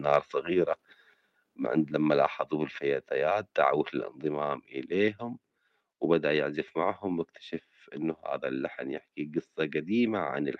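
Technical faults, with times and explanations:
2.25 s, microphone volume stepped down: right between "ما عند لما" and "الفتيات دعوه", the speech and the background behind it both drop by about 2 dB in one abrupt step and stay there. That's likely the call software deciding the mic input was running hot and knocking the device's input volume down a notch, so everything captured afterwards arrives quieter. The Opus call path just carries that lower level through, its top end stopping around 12 kHz.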